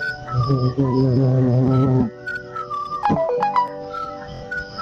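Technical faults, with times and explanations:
4.34 to 4.43 s, Bluetooth stutter: right near the end the sound catches and buzzes for a moment, a short slice repeating back to back like a tiny machine gun. The receiver ran out of fresh data and kept replaying its last buffer to fill the gap, which fits roughly three lost frames, about 70 ms of missing audio. When packets arrive again the sound picks up further along, as though it had kept playing through the hole.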